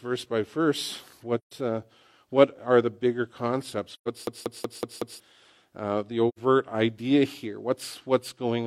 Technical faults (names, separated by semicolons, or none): AAC frame loss with muting; system hang loop